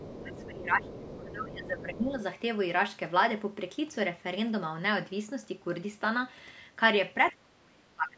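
A speech recording in which another voice surfaces faintly beneath the talker in three short scraps, at 0.00 to 0.07 s, 0.33 to 0.51 s and 0.82 to 1.16 s. This is the other side's voice leaking through, likely because the echo canceller left residual loudspeaker sound in the microphone signal. It sits roughly 15 to 20 dB below the main speech. On a spectrogram it shows as a weaker, separate set of harmonic bands overlapping the talker's. In the waveform it appears as low-level energy filling what would be quieter gaps. Across the same opening stretch, from 0.06 s to 2.2 s, the talker's level sags by up to about 15 dB. This is speech suppressed in double talk, likely from the canceller turning down everything while both sides spoke. It appears as a dipping envelope in the waveform and as dimmed, patchy upper harmonics on the spectrogram. A stronger dip of about 30 dB hits the last 0.7 s or so, from 7.32 s to the end, where the waveform nearly flattens and the spectrogram thins almost to nothing. 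The call's microphone path limits content to below 8 kHz, so the spectrogram is empty above that line.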